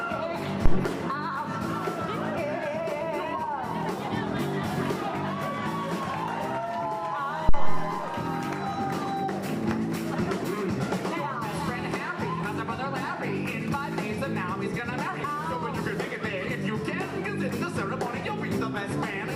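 Two phantom power thumps land here, at 0.66 to 0.83 s and 7.49 to 7.95 s, both peaking around -8 dBFS. A supply switching on a live input kicks a step through the coupling capacitors, giving a deep thud that dies away in about 39 ms, then 104 ms.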